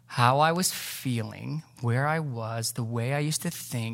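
At 0.56 s, between "how I" and "feeling where I was", a bit error spike lands on the speech: a flipped bit across three consecutive samples throws their value by a power of two, reaching about -24 dBFS, before the waveform snaps straight back. It is heard as a single sharp, broadband tick with no relation to the speech around it. Unlike a dropout, no sound goes missing, and nothing repeats the way a buffer glitch would.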